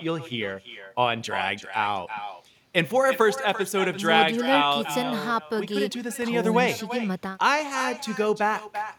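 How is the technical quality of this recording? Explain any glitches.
The quality is compromised by one fault that runs for the whole recording. An echo with no canceller shadows the speech from start to finish. The far end is playing the call through a loudspeaker. Its microphone captures that sound and sends it back unremoved. Each phrase returns roughly a third of a second later, after the network round trip. The copy sits about 10 dB below the direct speech. It sounds thinner, trailing every syllable like a quieter double.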